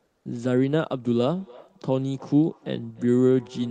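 From 0.07 to 0.25 s, about 180 ms of the quiet background is replaced by comfort noise: a steady, featureless hiss roughly 3 dB quieter than the real background, which itself sits about 54 dB below the loudest speech. The likely cause is discontinuous transmission in the call codec, with the receiver synthesising filler noise.

From 1.21 s to the end, feedback echo between two devices appears. A second device in the room replays the call, and the microphone picks it up again. The speech returns at intervals of roughly a third of a second, at most about 24 dB below the direct speech, thinner each time.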